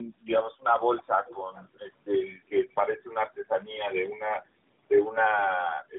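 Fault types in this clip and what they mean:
Tandem speech coding: The speech sounds rough, muffled and warbly throughout, with nothing above 3.8 kHz. Three speech codecs worked in series, each recoding the last one's degraded output, which fits a GSM full-rate coder followed by two AMR-NB stages.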